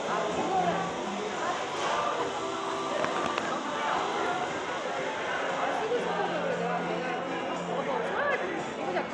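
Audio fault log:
throughout, Bluetooth SBC compression: a small bit pool likely starves the upper sub-bands, so treble flickers or vanishes under plainly audible grit and aliasing, consistent with about 96 kbps.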